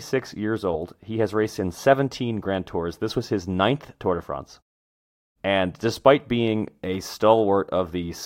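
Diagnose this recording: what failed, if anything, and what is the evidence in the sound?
Nothing failed in this recording, and the sound gives no evidence of any fault.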